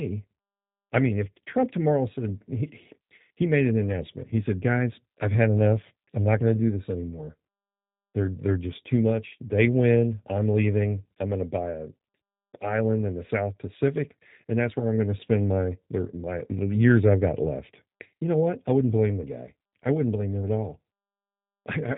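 Throughout, G.729 codec damage is plainly audible: speech rebuilt from filter and pulses sounds rough and synthetic, fitting an 8 kbit/s coder, with a spectrogram showing nothing above 3.8 kHz.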